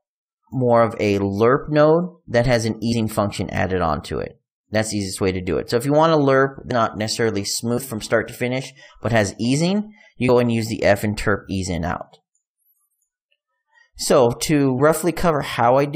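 Compressed frames skipped occur at 2.91 to 2.93 s, 6.70 s, 7.77 s, 10.28 s and 14.78 to 14.80 s. At each point whole coded frames never reach the output, so the audio leaps forward. The jumps are roughly a tenth of a second, a fifth, 70 ms, 150 ms and 50 ms, steps that fit frames of about 23 ms. Unlike a dropout, there is no silent gap.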